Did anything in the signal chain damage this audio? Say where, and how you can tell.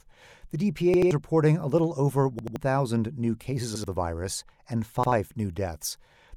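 Yes, a repeated buffer at the driver stage: roughly 85 ms chunks, which fits a 4096-sample buffer, replay at 0.94, 2.39, 3.76 and 5.04 s, causing hard-edged stutters.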